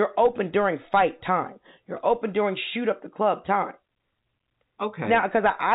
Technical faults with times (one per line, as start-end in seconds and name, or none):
none